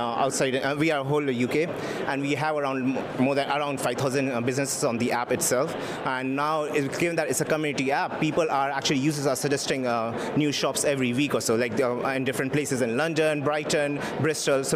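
No technical faults can be heard anywhere in the recording.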